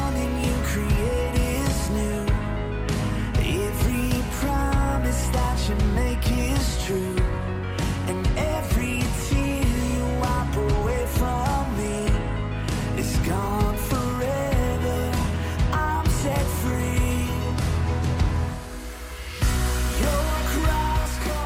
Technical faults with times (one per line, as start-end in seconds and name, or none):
none